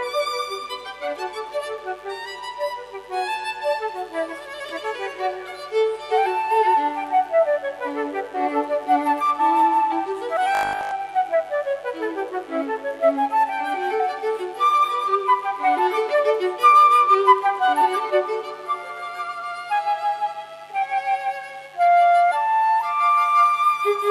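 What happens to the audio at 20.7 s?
At 20.7 s the mains buzz is present, as it is for the whole clip. It sits well below the main sound, around 35 dB down. Sharp switching spikes from the 50 Hz supply leak into the signal path twice per cycle. They produce a dense stack of 50 Hz harmonics reaching up to several kHz. The result is a steady, raspy buzz running under the audio at this moment.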